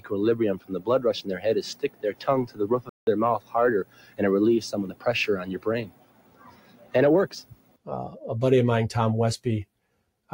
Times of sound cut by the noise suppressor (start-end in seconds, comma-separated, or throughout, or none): 0.58-0.87, 1.75-2.24, 3.39-3.54, 3.84-4.19, 4.88-5.05, 5.85-6.94, 7.42-7.88, 9.65-10.09